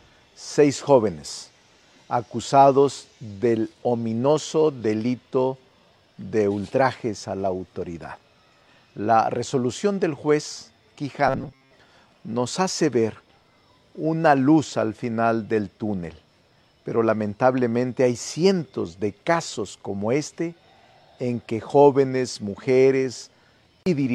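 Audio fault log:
11.28 to 11.72 s, robotic sound from repeated short buffers: for just under half a second the sound turns hard and metallic, with a rigid buzz at 134 Hz sitting over it while its rough outline still comes through. The likely cause is audio arriving too slowly, so a short stretch of about 7.5 ms was replayed over and over to fill the gaps. That looping covered most of this span and imposed its own fixed pitch.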